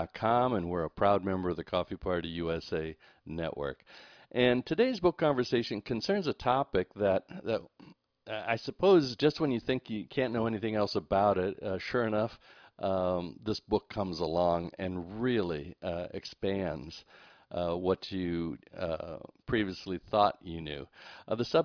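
No faults can be heard anywhere in the recording.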